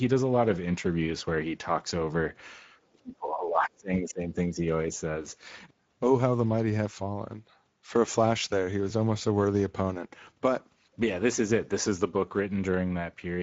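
The whole clip carries Speex codec damage, a plainly hoarse, noisy CELP texture at around 16.8 kbps. From 2.93 to 4.62 s the speech dips hard, down by roughly 30 dB for about one and a half seconds in all, likely speech suppressed in double talk by an echo canceller.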